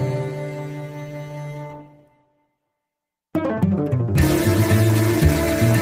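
No technical fault can be heard anywhere in this audio. Nothing in it calls for a time or a cause to be pointed out.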